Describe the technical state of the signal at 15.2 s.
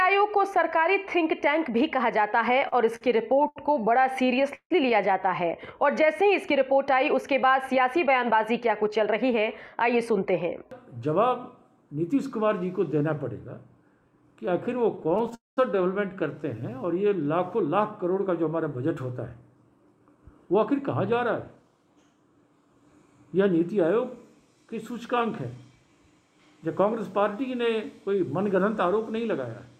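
At 15.2 s the signal is inside a burst of repeated stalls (stutter) running from 14.97 to 15.33 s. The stream kept falling behind playback, so the jitter buffer emptied seven times, and each time the last bit of sound was stretched to cover the wait. The longest gap is 14 ms and about 64 ms is filled in total, roughly a fifth of the span. Nothing is lost, but the audio drags and stutters.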